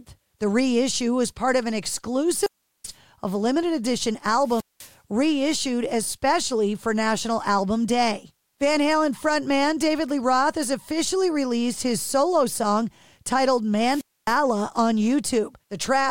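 This is speech, cut three times by a wireless microphone squelch dropout. The radio link fades, hiss swells, and the receiver mutes. Holes sit at 2.33–2.97 s (about 380 ms silent, before "of limited edition"), 4.41–4.96 s (200 ms, before "reissued especially for") and 13.85–14.42 s (260 ms, after "his solo song titled").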